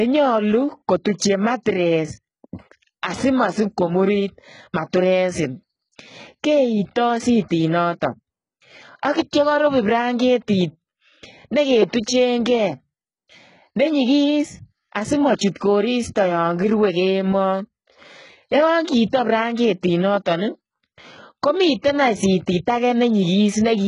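Throughout the speech the s sounds come out gritty and lispy, with a metallic sheen on the treble and nothing above about 11 kHz. The likely cause is heavy HE-AAC compression, around 12 kbps, where the upper band is rebuilt by copying lower bands upward rather than coded.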